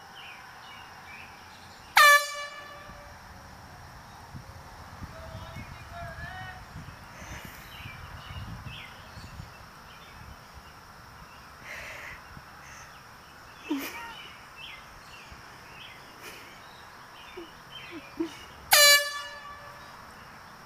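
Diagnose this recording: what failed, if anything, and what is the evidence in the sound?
Nothing failed; no fault is audible anywhere in the recording.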